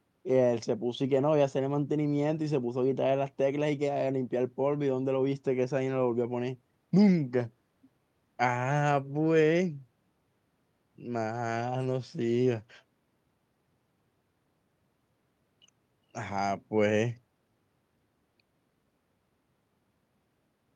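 No technical faults can be heard anywhere in this speech recording. Nothing in the audio stands out as a problem at any point.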